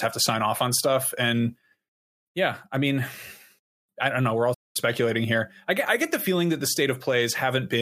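At 4.54 s the speech cuts out abruptly and stays silent until 4.76 s, a gap of about 210 ms, before resuming with "speculating here I get". This is a playback stall: the output stops mid-flow rather than fading, and the silence is long enough to register as a hitch in delivery. The likely cause is the player briefly running short of buffered data or having its audio thread blocked, so nothing reached the output until it recovered.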